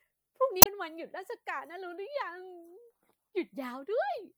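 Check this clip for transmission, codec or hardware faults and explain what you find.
One fault is audible: damaged data in the compressed stream, from 0.59 to 0.67 s in the speech. Corrupt bytes make the decoder misread frames and lose sync, giving a brief glitch.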